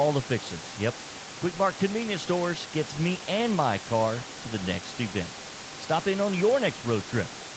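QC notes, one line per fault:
No faults to note.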